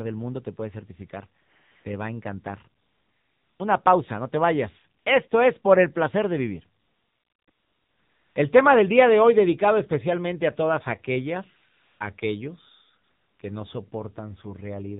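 AMR narrowband mobile codec damage runs through the whole speech clip. The 7.4 kbps AMR-NB coding band-limits everything to below 4 kHz and rebuilds the voice from a sparse pulse-driven vocal-tract model, so it sounds plainly buzzy and synthetic. AMR comfort noise replaces the real background at 1.42–1.84 s after "mundo te puedes certificar", 2.82–3.60 s after "va a encantar" and before "pausa no te vayas", 5.00–5.06 s, 5.28–5.30 s, 6.82–7.48 s after "el placer de vivir", 7.50–8.36 s, 11.74–12.00 s and 13.04–13.40 s. In each of these gaps the sender judged the talker silent and stopped sending speech frames, and the receiver filled the gap with smooth generated noise that switches in and out.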